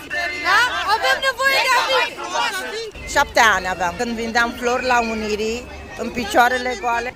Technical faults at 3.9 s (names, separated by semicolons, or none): none